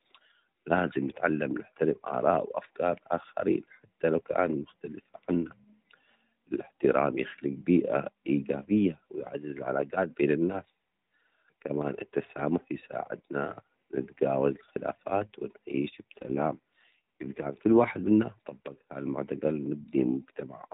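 From 15.94 s to 17.82 s the speech turns rougher, buzzier and more synthetic, then returns to its earlier quality. This is an AMR rate drop: the link pushed the AMR narrowband codec down to a lower mode, spending bits on error protection rather than on the voice model. The change fits a step from 12.2 kbps to 5.9 kbps. Unlike packet loss, there is no gap, and unlike band-limiting, the 4 kHz ceiling of the lightly coloured AMR-NB audio stays the same.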